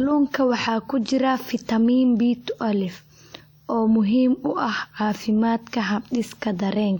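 A speech recording with plainly audible WMA compression damage throughout, likely from an early WMA encoder at a low bitrate such as 48 kbps. The sound rings and turns washy, and a hiss rises and falls with the speech as quantisation noise spreads across long transform blocks. On a spectrogram, energy smears in time around each sound and weak components drop out as patchy holes, while nothing appears above 20.1 kHz.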